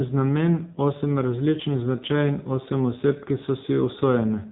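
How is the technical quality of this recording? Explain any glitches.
The technical quality is poor. The audio is heavily degraded by an AMR narrowband mobile codec from start to finish. Nothing above about 3.8 kHz survives, so the speech sounds thin and muffled. The codec rebuilds the voice from a vocal-tract model driven by sparse pulses, rather than transmitting the waveform itself. The heavy buzzy, synthetic quality fits a low bitrate mode of around 6.7 kbps.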